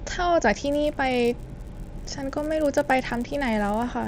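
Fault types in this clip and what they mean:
Resampler restarted on every block: the 16 kHz to 48 kHz conversion started afresh on each 10 ms block, so every block edge was computed without its true neighbouring samples. From 0.51 s onward, those edge errors form a 100 Hz buzz under the speech.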